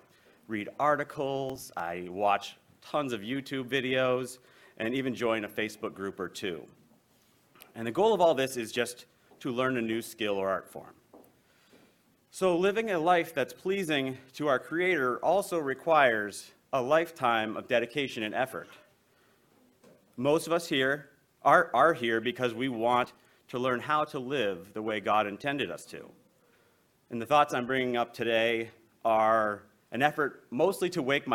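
From 1.50 to 1.80 s, and again from 23.04 to 23.17 s, processor overload crackle: the processor misses a run of deadlines on what sounds like roughly 5 ms buffers, skipping each, so short hard-edged gaps pile up into gritty tearing.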